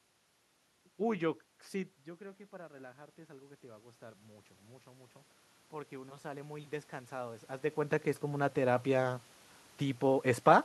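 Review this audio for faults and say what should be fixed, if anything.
Automatic gain rising, 1.72–5.17 s and 5.69–9.13 s: after the input fell about 13 dB, the gain control climbed about 5 dB, then about 6 dB, swelling voice and room noise together. To prevent it, keep the talker at a steady distance from the microphone or slow and cap the automatic gain control.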